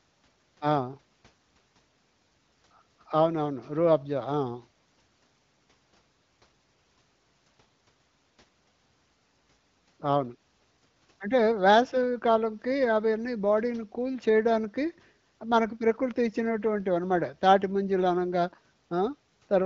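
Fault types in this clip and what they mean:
No fault types are present in this clip.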